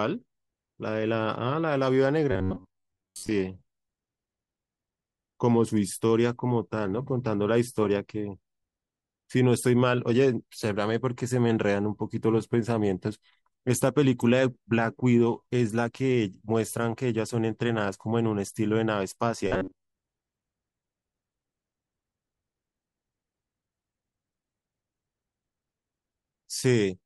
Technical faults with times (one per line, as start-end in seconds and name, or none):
2.32-3.32 robotic sound from repeated short buffers
19.47-19.90 robotic sound from repeated short buffers